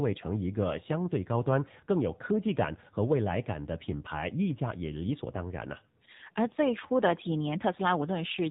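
From start to finish the speech sounds muffled, buzzy and synthetic, with nothing above 4 kHz. This is the AMR narrowband mobile codec: the voice is rebuilt from a vocal-tract model and sparse pulses, and the plainly audible damage fits its 7.4 kbps mode.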